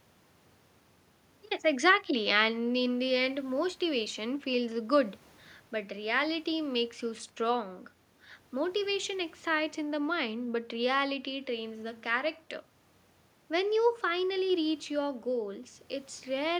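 Nothing stood out on listening to this speech recording beyond a faint background of room noise sitting about 49 dB below the speech.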